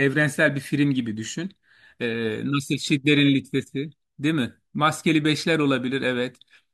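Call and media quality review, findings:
No audible faults found in the speech clip; no dropouts, distortion or timing defects to attribute to any component.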